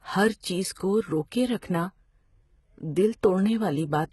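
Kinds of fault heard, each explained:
HE-AAC compression: The speech has nothing above 11.8 kHz. Its treble sounds rebuilt rather than real, with heavy damage and gritty, lispy s sounds throughout. The likely cause is spectral band replication copying lower bands upward, which fits a very low bitrate.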